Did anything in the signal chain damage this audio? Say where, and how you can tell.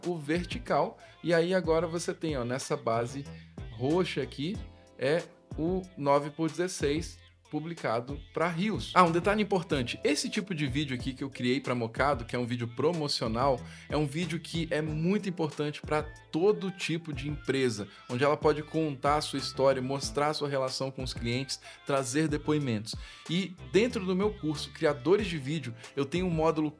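No, nothing along the signal chain has left audible damage on this recording.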